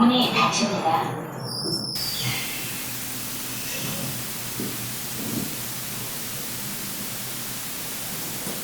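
From 1.95 s to the end, low bit depth with dither sets in. Only 4 bits remain, so dithered rounding leaves a steady hiss nearly as loud as the sound.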